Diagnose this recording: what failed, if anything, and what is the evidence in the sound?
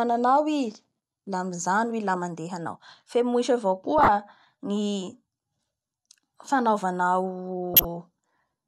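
The codec stage failed: a corrupt frame decoded at 3.98–4.09 s and again at 7.74–7.85 s, each a loud 0.1 s glitch covering roughly four frames. Flipped bits produced wrong gains and codes, so the spectrogram shows frame-wide blocks of energy unrelated to the speech.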